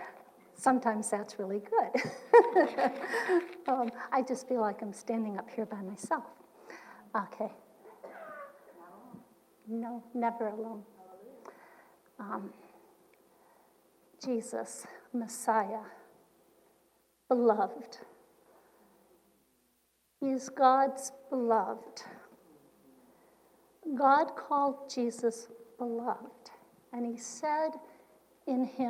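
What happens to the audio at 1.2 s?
Nothing goes wrong at 1.2 s; the audio plays through that moment intact, with no dropout, click or distortion.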